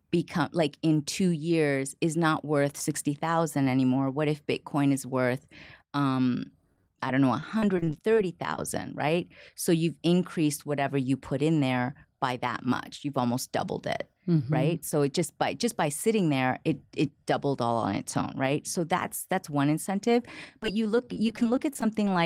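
From 6.72 to 8.57 s, after "bitcoin is worth um", repeated packet loss (robotic sound) chops the speech. Short holes, up to 32 ms, are patched by stretching the last sound. The same fault returns from 20.63 to 22.07 s, after "that's that's one incentive", with shorter gaps.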